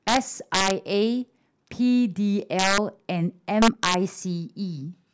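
Integer overflow cracks hit the speech at 0.08–0.17 s, 0.54–0.71 s, 2.59–2.78 s and 3.62–3.94 s, where peaks exceed full scale by about 3 dB (about 5 dB in the second). Instead of limiting, those samples wrap to the opposite sign, producing harsh, violent cracks.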